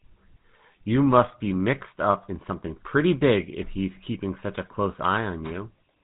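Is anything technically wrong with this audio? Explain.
Yes. GSM full-rate codec damage runs through the whole speech clip. The codec rebuilds the voice from a vocal-tract model driven by sparse, regularly spaced pulses, which fits a 13 kbps GSM full-rate stream. This gives a plainly audible buzzy, gravelly roughness, and nothing above 3.8 kHz survives.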